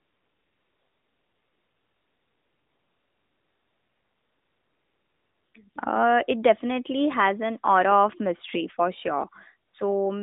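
From the start to 5.54 s, the phone judged nothing was being said and stopped sending speech frames, so what you hear is AMR comfort noise: smooth, steady synthetic hiss instead of the real background. It flicks back in briefly at 5.70–5.76 s and 9.70–9.74 s.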